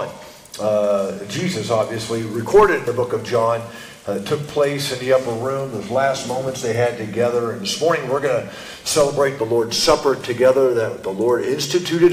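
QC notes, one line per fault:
No faults were found anywhere in the clip. Nothing needs flagging for QC.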